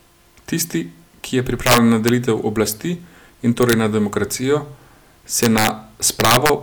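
This speech clip has integer overflow in four stretches: 1.67 to 2.09 s, 3.63 to 3.73 s, 5.43 to 5.69 s and 6.20 to 6.49 s. Wherever the level runs past full scale, by about 7, 2, 4 and 6 dB respectively, the sample values wrap to the opposite sign instead of being limited. Each such peak jumps across the full range, giving violent cracks far harsher than the flattened, buzzy distortion of ordinary clipping.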